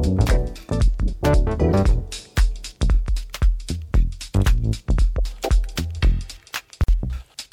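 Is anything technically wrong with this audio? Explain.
Yes. At 6.84 s, separately encoded pieces were joined untrimmed, leaving encoder delay and padding: a 48 ms silence with smeared edges, a gap at a join of encoded pieces.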